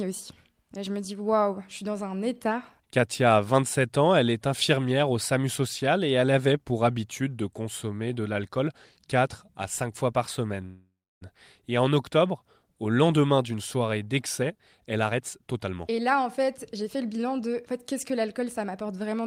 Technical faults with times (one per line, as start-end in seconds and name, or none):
10.65-11.23 call audio freeze
14.41-19.27 jitter buffer speed-up